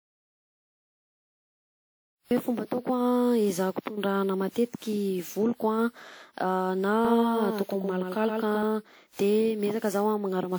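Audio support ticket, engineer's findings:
Swirly, smeared, hollow texture across the whole clip, with softened consonant attacks; bandwidth still reaches about 20.1 kHz. Generation loss, likely from repeated lossy encoding, around seven passes, consistent with WMA at 96 kbit/s, each requantising on a shifted frame grid.

Clip opens in silence, no room tone, already under way at 0 s; speech enters abruptly at 2.31 s. Audio dropout to silence: likely input path lost while the encoder kept writing silence, so the content in that gap is unrecoverable.

7.05 to 8.63 s: speech doubled by a dry, full-band copy trailing about 100 ms behind and roughly 5 dB quieter, starting and stopping abruptly. Doubled audio track, likely a second slower capture path or misaligned duplicate in the edit.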